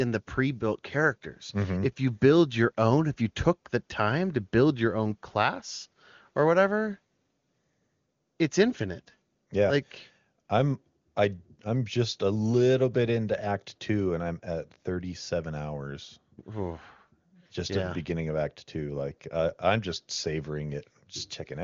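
Speech carried over an AMR wideband (HD Voice) link, with nothing above about 7.2 kHz and a clarity that fits the codec running at its top rate of 23.85 kbit/s, and no technical faults can be heard in it.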